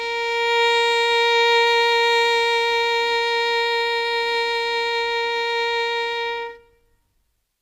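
A music clip with plainly audible HE-AAC compression throughout: synthetic, metallic treble that stops at 15.4 kHz, unlike dull MP3-style loss, likely from band replication near 24 kbps.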